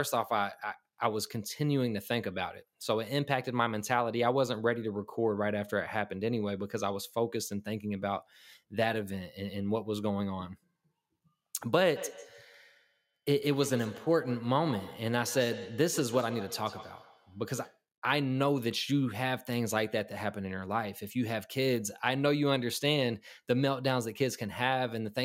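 Speech with feedback echo between two devices from 11.96 to 17.84 s: each word returns roughly every 150 ms, about 13 dB down, appearing as evenly spaced fading copies on the waveform.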